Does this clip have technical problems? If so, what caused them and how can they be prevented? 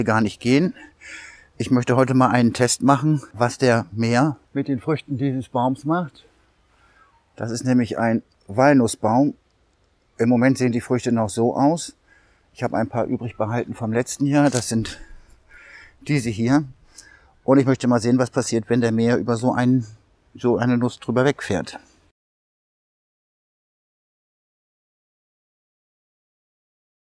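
No, nothing in this clip points to a technical fault, so there is no cause to trace and nothing to prevent.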